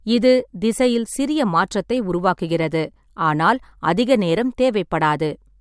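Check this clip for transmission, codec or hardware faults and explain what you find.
Nothing faulty can be heard anywhere in the speech.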